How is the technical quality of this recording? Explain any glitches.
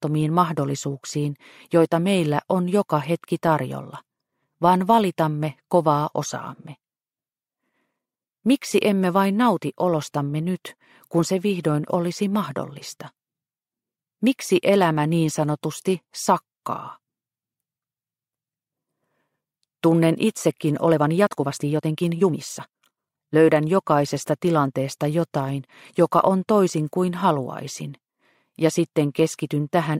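One glitch stands out: a time-stretched section from 20.82 to 23.36 s. Across those two and a half seconds the pace jumps to about 1.35 times normal while the pitch stays put, so the passage sounds rushed, then snaps back to the original tempo. The likely cause is software squeezing that stretch to fit a shorter length, preserving pitch by discarding short slices of audio and splicing the remainder together.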